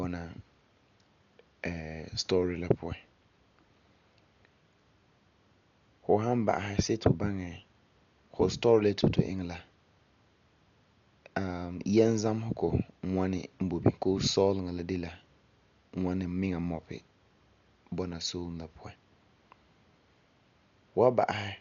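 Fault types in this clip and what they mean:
Dolby Digital compression: The speech sounds dull and muffled throughout, with nothing above 6.9 kHz, and a rough, fluttering noise clings to voiced sounds. The cause is likely heavy Dolby Digital coding at a very low rate, which fits about 48 kbps. The encoder narrows the band and leaves many frequency lines without mantissa bits. The decoder then fills those gaps with dither noise, producing the grainy, unsteady texture around tones.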